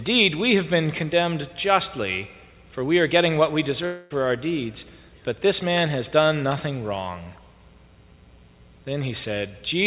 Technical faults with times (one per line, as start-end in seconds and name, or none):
3.86-4.12 long network dropout